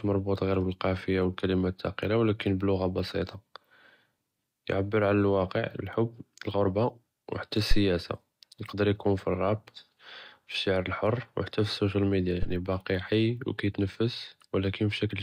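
At 7.71 to 7.78 s a phantom power thump hits, peaking near about -10 dBFS and dying within 15 ms. A supply was switched on or off on the live input, and the step passed through the coupling capacitors. A weaker thump follows at 12.43 to 12.64 s, after "אלסושיאל מדיה" and before "חי ו", near about -18 dBFS, decaying over 48 ms.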